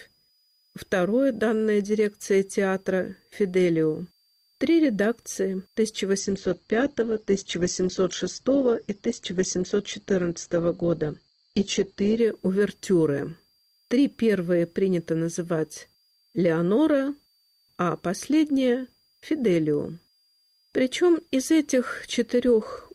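Switching supply whistle, throughout: a switching power supply leaks in as a faint high whistle, drifting between 4.6 and 4.9 kHz, far below the sound.

Adaptive stream at a lower bitrate, 6.19 to 12.19 s: the stream suddenly switches to a lower-quality version without any gap. The sound turns dull and artefact-laden, with nothing above 8.1 kHz, which fits Opus dropping from 64 to 12 kbit/s.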